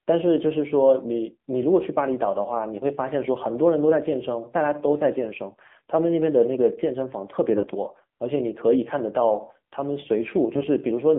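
AMR narrowband mobile codec, throughout: the speech passes only between about 200 Hz and 3.6 kHz, and it sounds plainly buzzy and synthetic. The coder rebuilds the voice from a vocal-tract model and a few pulses per subframe, and that damage points to a low mode of around 7.4 kbps.

AMR bit errors, at 5.64 to 5.75 s and again at 7.52 to 7.69 s: in both spans the voice briefly turns hoarse, scratchy and gargly while holding its pitch and level. Flipped bits in the less protected parts of the frames, a few percent of them, put the excitation pulses in the wrong places and skew the finer gain and spectral values. The spans fit about five and eight frames respectively.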